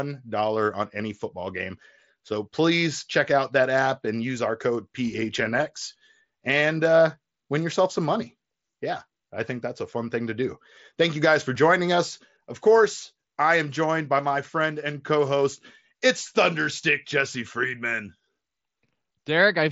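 At 11.55 s, between "you guys for" and "joining us", there is a concealed Bluetooth headset packet loss. About 7.5 ms of audio, consistent with a single lost mSBC frame, was filled by repeating a matching stretch of the preceding waveform, leaving only a brief, nearly hidden blip in the speech.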